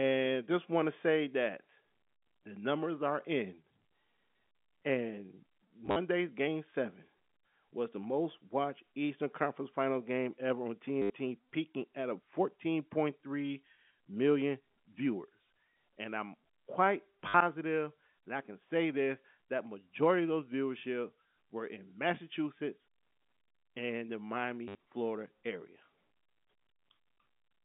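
At 5.86 to 5.96 s, just before "game seven", packet loss with last packet repeated begins. Audio dropped out across that span, with the longest run 50 ms. The receiver replayed the last good packet to fill each gap. Further repeats follow at 11.02 to 11.1 s, between "game ever on" and "peaking at a", and at 17.28 to 17.34 s, after "I'm quite". The last is at 24.68 to 24.75 s. Each gap sounds like a short robotic stutter. The spacing fits 10 ms packets, so the flutter runs near 100 Hz. The sound is telephone-band throughout, about 150 Hz to 3.6 kHz, from G.711 coding.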